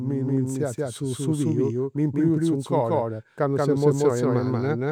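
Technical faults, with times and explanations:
Throughout, doubled audio track: every syllable is repeated about a fifth of a second later by a full-band copy at roughly equal loudness, with no decay or room colour. This is likely the same speech captured twice, once through a slower path.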